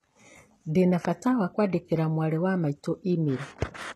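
Throughout the speech, HE-AAC compression at a very low bitrate is the likely cause: the treble sounds gritty and lispy, and a spectrogram shows copied-looking bands and nothing above 12.3 kHz.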